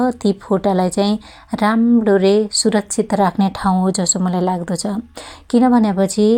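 No technical faults can be heard in this speech recording. There is no moment in it that needs a time mark or points to trouble anywhere along the signal chain.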